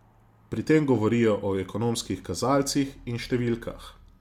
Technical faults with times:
none

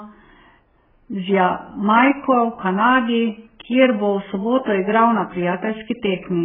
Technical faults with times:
0.00-6.44 AAC compression

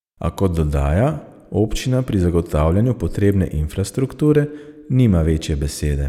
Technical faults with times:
none

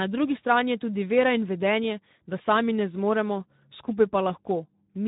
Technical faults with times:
0.00-5.08 Speex codec

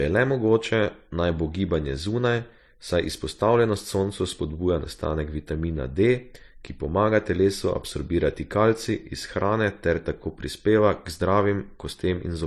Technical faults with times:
0.00-12.46 transcoding between lossy codecs

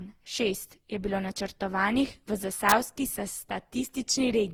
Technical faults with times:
0.00-4.53 generation loss

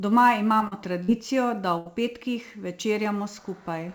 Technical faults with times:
0.00-3.94 sample clock jitter
0.58-0.73 short concealed packet loss
1.03-1.10 burst of packet loss
1.78-1.87 burst of packet loss

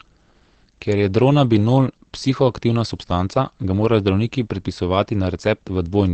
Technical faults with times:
0.00-6.14 Opus compression

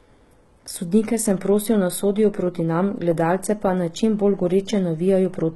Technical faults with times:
0.00-5.55 HE-AAC compression

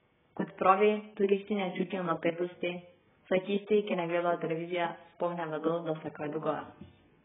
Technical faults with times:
0.00-7.24 AAC compression

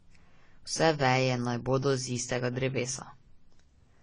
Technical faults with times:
0.00-4.02 AAC compression

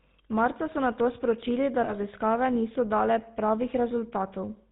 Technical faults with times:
0.00-4.71 GSM full-rate codec
1.84-1.93 lost GSM frames

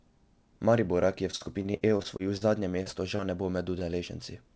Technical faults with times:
1.31-2.44 repeated packet loss (robotic sound)
2.83-2.89 short concealed packet loss
3.16-3.21 short concealed packet loss

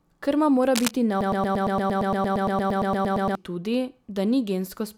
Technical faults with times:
0.74-0.91 cable scratch noise
1.21-3.35 broken-record loop

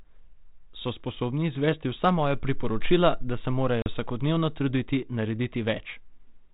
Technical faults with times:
3.82-3.88 packet loss on an ADPCM call

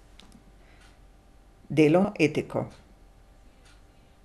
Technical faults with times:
2.04 compressed frames skipped
3.61 compressed frames skipped

